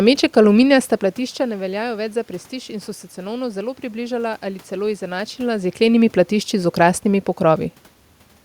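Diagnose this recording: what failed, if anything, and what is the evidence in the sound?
Nothing in the recording points to a failure at any stage of the chain. The steady background noise belongs to the room around the microphone, and the level shifts near half a second and again around 5 s are the talker moving relative to the microphone.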